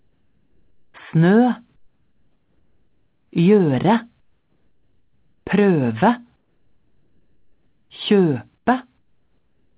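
Comfort noise in place of the background fills the gaps at 0–0.94 s, 1.76–3.32 s, 4.2–5.46 s, 6.36–7.9 s, 8.58–8.66 s and from 8.98 s to the end. Each time the sound stops, the real background gives way to a flat, featureless hiss about 7 dB quieter (about 11 dB in the brief 8.58 s gap). This is likely discontinuous transmission, with the receiver synthesising noise while the sender is silent. The hiss, like everything else, has nothing above 4 kHz, which fits a narrowband G.711 call path.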